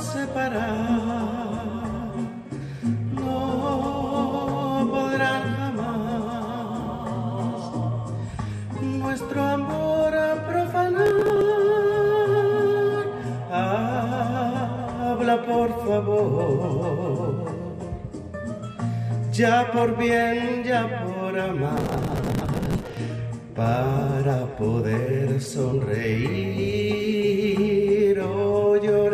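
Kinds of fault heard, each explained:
Processor overload crackle: the processor missed many tiny buffer deadlines in a row, each skip of a few milliseconds leaving a hard-edged gap. It shows as gritty bursts near 11.06–11.41 s and 21.77–22.97 s, unlike a single dropout's one clean silence.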